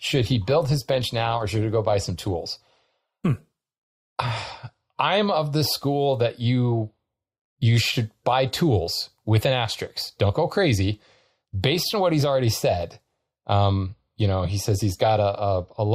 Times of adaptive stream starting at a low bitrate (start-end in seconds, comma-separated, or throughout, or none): 0.00-4.00